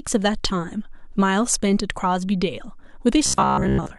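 From 3.26 s to the end, audio likely arrived too seldom, so short buffers were replayed over most of it. The result is robotic sound from repeated short buffers, a metallic 66.7 Hz buzz.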